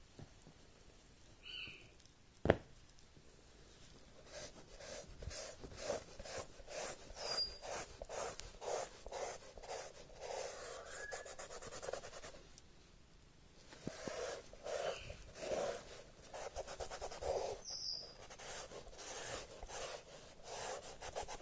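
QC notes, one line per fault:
Nothing stood out on a careful listen, so there is nothing to log for this clip.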